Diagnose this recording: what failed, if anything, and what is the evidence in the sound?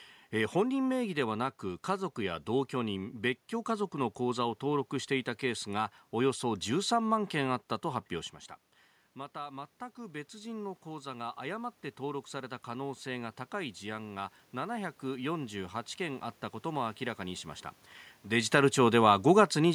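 Automatic gain rising, from 9.33 s to 17.5 s, in the call-processing stage. Just before this, around 8 s, the talker moves away and the input drops by about 12 dB. The gain control reads that as a quiet source and slowly raises its gain by about 10 dB over roughly eight seconds. The evidence is that the voice and the room noise swell together, so the rise comes from the gain stage rather than from the talker.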